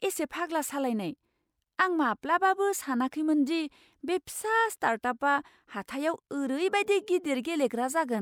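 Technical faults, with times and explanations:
No technical faults are audible anywhere in this speech.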